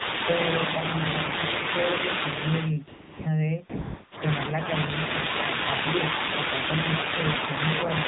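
Throughout, the speech passes through the AMR narrowband mobile codec at 7.4 kbps. The narrow 8 kHz path drops everything above 4 kHz, and the low bitrate leaves the vocal-tract model short of pulses, so the voice sounds plainly buzzy, muffled and synthetic.

From 0.0 to 2.73 s there is an echo leak. The far end's echo canceller likely failed to remove its loudspeaker's output from its microphone, so a copy of the speech returns about 0.35 s late, only a little quieter than the original, and smears over it. The same fault returns from 4.5 to 4.86 s with a similar delay of about 0.35 s.

Between those stretches, AMR comfort noise fills two pauses, from 2.88 to 3.26 s and from 3.70 to 4.12 s. The sender classed the talker as silent and stopped sending speech frames for 380 ms and then 420 ms, and the receiver generated smooth synthetic hiss in place of the real background. That hiss switches in and out.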